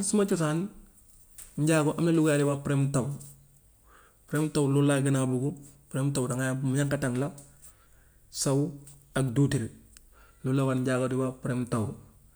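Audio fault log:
No faults are audible anywhere in this speech.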